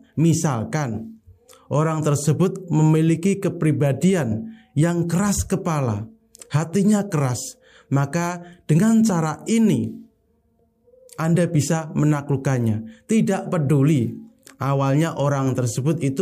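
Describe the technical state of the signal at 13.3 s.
At 13.3 s the signal is intact, with no audible technical fault at that point.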